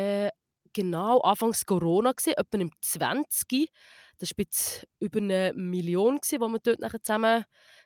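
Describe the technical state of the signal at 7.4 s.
At 7.4 s the speech signal is intact, with no audible technical fault at that moment.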